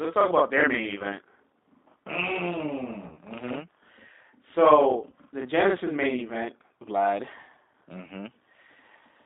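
G.729 codec damage runs through the whole speech clip. The sound is squeezed into roughly 250 Hz to 3.7 kHz, and rebuilt from filter and pulse parameters at what sounds like 8 kbit/s, which leaves it plainly rough and synthetic.

Channel delay (doubling) lasts from 0 to 6.48 s. One channel arrives 40 ms late and is summed with the other, so every sound is followed by an equal-level slap copy.

VoIP packet loss concealed by the speech codec occurs at 3.08–3.18 s and 5.10–5.12 s. The decoder stretches its last pitch and filter into a buzzy tone or coloured noise that fades, which fits two lost packets and then one. The speech stays weakened briefly after each gap.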